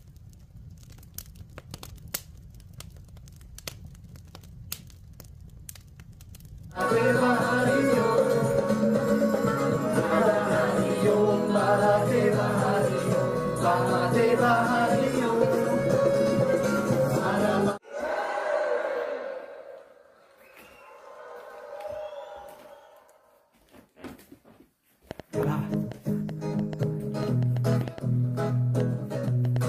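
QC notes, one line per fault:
25.11–29.57 s: train of clicks. A run of roughly twenty short, similar pulses ticks over the sound at about 4.27 per second, spaced unevenly rather than on a steady beat, and each one pokes out a few decibels above the programme (about 5 dB). Because the pulses sit on top of the audio instead of replacing it, they remain audible through quieter moments too. The likely cause is interference from nearby equipment or a faulty connection or power supply injecting repeated spikes.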